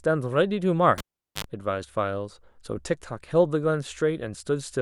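At 0.98 s the cable is pulled and plugged in: a pop, about 0.41 s of near silence, then 50 Hz mains buzz before a second pop at 1.44 s, unlike a plain dropout.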